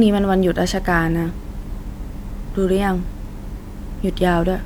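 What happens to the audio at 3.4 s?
Nothing goes wrong at 3.4 s: the speech carries on intact through that moment with no audible fault.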